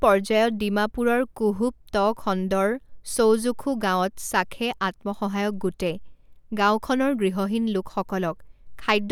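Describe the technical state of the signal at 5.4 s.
At 5.4 s the speech signal is intact, with no audible technical fault at that moment.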